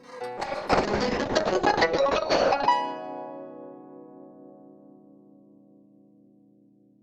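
From 0.4 s to 2.77 s there is a call bitrate drop: the connection's bandwidth estimate collapsed and the encoder was pushed from 64 kbps down to 6 kbps, sitting at that floor for about 2.29 s. Starved of bits, it coded the music far more coarsely and narrowed the audio band from 20 kHz to 8 kHz. The music turns muffled and loses its top end, with a rough, watery texture until the bitrate climbs back.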